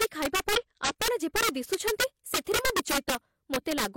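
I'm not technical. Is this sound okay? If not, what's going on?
No. Throughout the speech there is integer overflow: the level was pushed too high, and instead of being limited, the loudest peaks wrap around to the opposite extreme. A small share of the loudest moments turn into harsh, violent cracks, much sharper than ordinary distortion.

At about 0.56 s there is a short blip caused by damaged data in a compressed stream. Part of the stored file is corrupted there, so the player misreads that tiny piece, loses its place, and jumps ahead to the next readable section.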